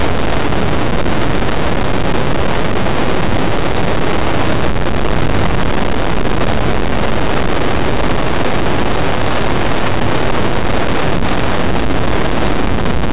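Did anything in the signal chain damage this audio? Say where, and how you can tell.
Yes. Throughout, the audio has distortion, and pauses fill with steady noise rather than going quiet. This is likely a stuck bit at the converter or its data lines. One fixed bit offsets about half the samples and flips around zero.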